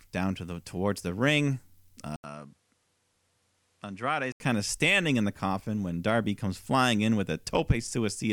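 At 2.16 s, after "the towards the ring", an 80 ms gap leads into duller, quieter sound with nothing above 11.6 kHz, added low noise and a level drop. Likely an input switched to a poorer device, it clears at 4.40 s before "kind of standing in".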